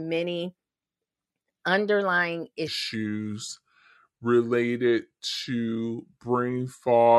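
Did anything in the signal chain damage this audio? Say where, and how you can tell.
Yes: there's a section at the wrong speed from 2.68 s onward, playing at 0.74x, so the speech turns slower and roughly five semitones lower, likely a playback clock mismatch.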